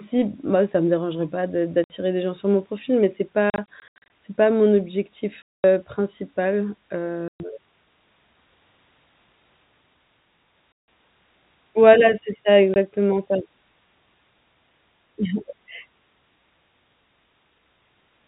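The speech drops into hard-edged silent holes at 1.84–1.9, 3.5–4.1 (scattered gaps up to 80 ms), 5.43–5.64, 7.28–7.4, 10.72–10.88 and 12.74–12.76 s: packet loss filled with silence, gaps fitting 20 ms packets on a band-limited G.711 telephone line.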